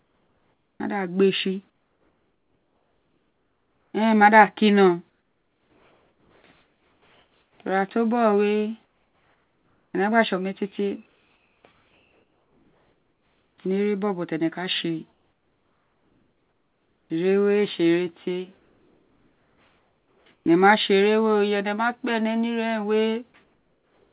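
Speech carried over a call path with nothing above 4 kHz, pointing to G.711 at 64 kbps, shows comfort noise in place of the background at 0–13.58, 15.12–17.10, 18.58–20.46 and 23.44–24.12 s, likely from discontinuous transmission. On a spectrogram these stretches show flat, featureless noise, about 6 dB quieter than the real background at 15.12–17.10 s and about 4 dB quieter at 23.44–24.12 s. At 0.77–0.80 s the onset is likely clipped by the voice detector, so the waveform jumps abruptly from noise into sound with no gradual rise.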